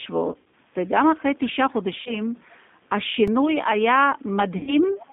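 Throughout, the speech carries the sound of the G.729 codec at 8 kbit/s: the band is held to roughly 200 Hz to 3.6 kHz, and the pulse-based rebuilding of each frame leaves a plainly rough, slightly synthetic texture on every syllable.

From 0.32 to 0.54 s, VoIP packet loss concealed by the speech codec sets in. About 140 ms of audio is missing across a 200 ms stretch, with the longest gap 80 ms. The decoder extends its last pitch and filter, so the sound turns into a fading buzz and stays weak as it recovers.

The same concealment returns from 2.02 to 2.18 s. The gap here is shorter, about 40 ms, which fits two lost packets, and it leaves a brief buzzy smear.

At 3.28 s a repeated buffer occurs. One block of about 2.7 ms, which fits a 128-sample buffer, plays twice with a hard join. It is heard as a single click rather than a stutter.

From 4.57 to 4.75 s, packet loss concealment hits again, with about 100 ms lost. 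The decoder's stretched, decaying tone replaces the speech, and the sound stays thin and distorted after packets resume.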